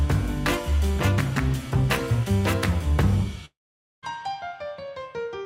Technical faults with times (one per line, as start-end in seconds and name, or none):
3.45-4.04 long network dropout